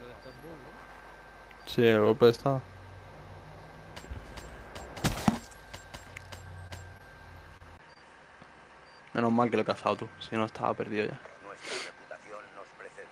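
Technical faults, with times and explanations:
6.67 s, 6.97 s, 7.57 s and 7.94 s: short concealed packet loss. About 20 ms of audio went missing each time, and the receiver bridged the gap by extending the preceding sound before blending back. Each one is a brief smear or wobble, not a lasting change in tone.
7.77 s to the end: input switched to a poorer device. After a 20 ms silence at the switch, nothing above 10.2 kHz remains and a new noise floor appears roughly 35 dB below the signal, with the level unchanged. That is likely a change to a different microphone or headset profile, and unlike the dropouts it persists.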